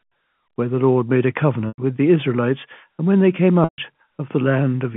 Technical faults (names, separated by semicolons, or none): packet loss with pitch repetition